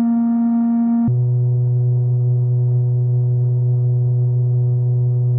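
A music clip with a section at the wrong speed: from 1.08 s to the end at 5.39 s, playback drops to about 0.53 times the original rate, so the music turns slow and sinks roughly ten semitones in pitch, likely from a player or editor running it on a mismatched clock.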